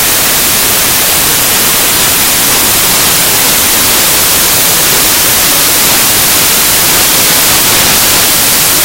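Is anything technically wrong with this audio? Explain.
Yes. Throughout the clip, samples built from the wrong bytes turn the audio into loud, harsh broadband noise. The reader assembles each sample's bytes in the wrong order or at a one-byte offset, so the rapidly changing low-order bits land in the most significant position. On a spectrogram this shows as dense broadband energy across the frequency range. The waveform looks like a dense random fill.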